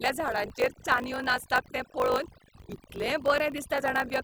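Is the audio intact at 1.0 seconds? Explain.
No. At 1.0 seconds, as throughout the clip, overdone noise removal has cut frequency bands near the noise floor, leaving a lowered background that breaks up into twinkling specks. A block size mismatch (truncated) also discards the end of each written block, which fits 1024-sample blocks, producing a 50 Hz buzz and speech running 1.16 times fast.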